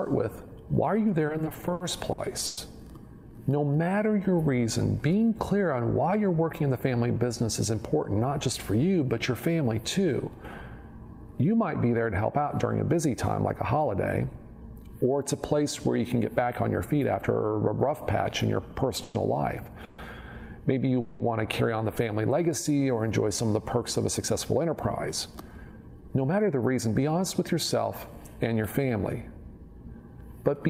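From 1.27 to 2.59 s there are repeated stalls (stutter): the jitter buffer kept running empty, and in eleven short gaps (the longest 110 ms) the last sound was held and continued, covering about a quarter of that stretch. The audio drags and catches. On a spectrogram these gaps show as smeared, frozen frames.

Between 5.99 and 6.95 s, jitter buffer speed-up plays the audio at 110% speed with the pitch unchanged. Many tiny pitch-period pieces are cut out to reduce the backlog by about a tenth of a second. The waveform looks slightly compressed in time, with no visible gaps. The same happens from 16.87 to 17.45 s at 109%.

From 19.03 to 21.22 s, three longer stalls, up to 190 ms, hold and fade the sound. They appear as flat, static stretches in the spectrogram.

The longest speed-up runs from 24.07 to 27.99 s at 108%. It sounds hurried and removes roughly a third of a second.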